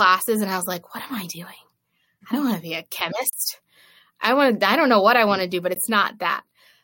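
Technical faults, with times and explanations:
3.30–3.33 s and 5.75 s, block of digital silence: after "want to be a" and again after "want to do but", the audio drops to silence, for 30 ms and then about 15 ms. The sound stops and resumes with no fade. The longer gap reads as a brief hole, the shorter as a tick. The waveform shows a flat line between abrupt edges. The spectrogram shows a dark vertical strip.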